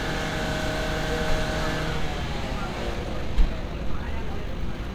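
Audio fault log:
2.91–4.95 s, time-stretched section: from here to the end the audio suddenly runs about 1.47 times faster while the pitch stays put, so it comes across rushed. It's likely software squeezing that stretch to fit a length by dropping short slices.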